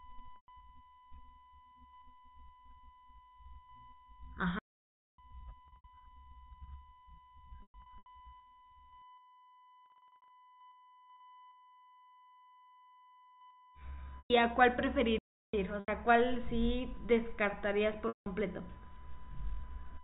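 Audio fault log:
throughout: USB whine. A steady tone fixed at 1 kHz sits about 25 dB below the speech for the full length and never glides or changes pitch. USB traffic pulls current from the power or ground line in 1 ms frames, which produces exactly this 1 kHz repetition. Mains hum would sit at 50 or 60 Hz and its harmonics instead. A tone that belongs to the recording itself would start and stop with the sound rather than run unbroken beneath it. The tone falls well inside the 4 kHz telephone band, so the band limit does nothing to remove it.
0.36–0.48 s, 5.68–5.84 s, 7.62–8.06 s, 9.86–10.30 s, 14.18–14.30 s, 15.80–15.88 s, 18.08–18.26 s: packet loss with pitch repetition. Audio drops out for between 80 and 260 ms per event, and the receiver bridges each gap by repeating the last pitch period. The repeats give a brief held, buzzy sound that fades rather than a clean cut. At 5.68, 7.62 and 9.86 s the losses are scattered, with runs of no more than 60 to 120 ms. 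The losses fit 20 ms packets. A stall goes fully silent instead of buzzing.
4.59–5.18 s and 15.18–15.54 s: playback stall. The output goes completely silent mid-flow, for about 0.59 s and then about 0.35 s, and afterwards the sound resumes without any synthetic fill. The likely cause is a player that ran short of data or had its thread blocked until it recovered. Packet-loss concealment would fill the gap with a repeated buzzy period. These gaps contain nothing at all and are longer than any single run of concealed loss in this clip.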